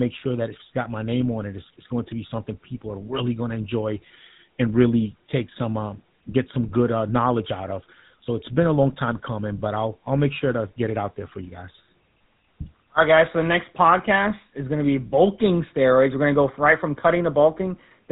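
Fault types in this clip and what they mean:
GSM full-rate codec: The speech has been squeezed through the original GSM mobile coder throughout, which fits a 13 kbit/s rate. It rebuilds the voice from a vocal-tract model fed by a coarse, regularly spaced pulse train, and that sparse excitation leaves plainly audible coding damage. The band also stops at about 3.9 kHz, so the sound is dull and boxed in, with nothing above that.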